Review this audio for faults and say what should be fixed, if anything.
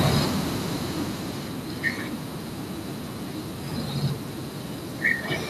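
Automatic gain falling, 0.05 to 1.66 s: the speech starts, then the gain control, finding the input too loud or its background too strong, lowers level about 9 dB, background included. The waveform envelope tapers; the spectrogram dims evenly at all frequencies. Fixed gain or lower input level prevents it.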